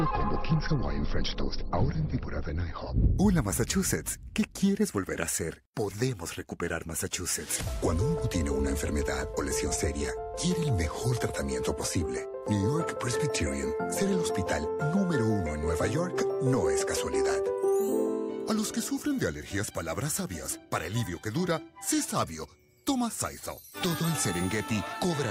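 From 0.44 s to 24.93 s, faint clock slip clicks tick steadily about every 0.4 s, likely from unsynchronised clocks around 50 ppm apart. Their even spacing separates them from random crackle.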